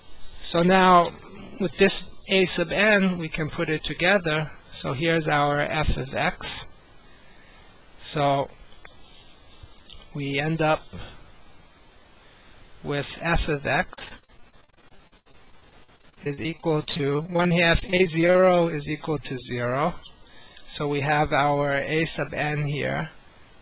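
From 13.94 to 18.46 s there is repeated packet loss (robotic sound): dozens of short dropouts, the longest about 80 ms, arrive one after another. Each hole is papered over by extending the preceding sound, with about 31% of the stretch concealed, so the audio turns choppy and robotic, with pieces missing. On a spectrogram the stretch shows repeated frozen, smeared frames and breaks. The waveform shows looped-looking segments. Throughout, the call path leaves nothing above 4 kHz, which fits G.711 at 64 kbps.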